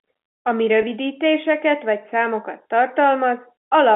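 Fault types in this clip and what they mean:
Packet loss with pitch repetition: at 0.82 s, 10 ms of speech, which fits one lost packet, is bridged by repeating the last pitch period, so a brief held, buzzy smear appears instead of the silent gap or click of a plain dropout.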